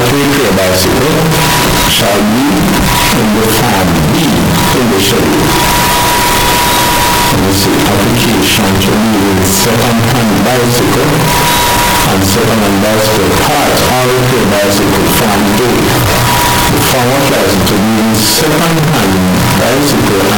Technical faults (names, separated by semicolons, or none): float read as integer